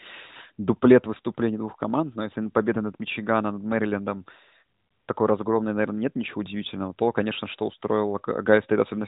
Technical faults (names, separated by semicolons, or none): none